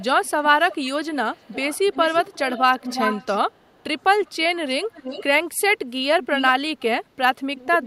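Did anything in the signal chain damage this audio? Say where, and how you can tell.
Yes. A delayed copy of the speech trails about 0.35 s behind, throughout 0.0 to 3.84 s, then in scraps at 4.25–4.31, 4.93–5.24, 6.23–6.84 s and from 7.56 s to the end, strongest around 10 dB down. This is echo leak in call processing, likely a loudspeaker echo canceller letting its microphone pickup slip back.

At 6.74–6.78 s, inside the echo burst, the near talker briefly dips by about 15 dB for roughly 40 ms. This is speech suppressed in double talk: with both sides active, the call processing's echo canceller likely could not separate talker from echo and turned both down.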